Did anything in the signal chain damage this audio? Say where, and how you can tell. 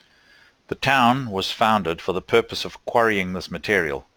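Yes: crude rate conversion from 44.1 to 48 kHz, repeating nearest samples without filtering, adds gritty inharmonic fizz throughout the speech, roughly 25 dB below it.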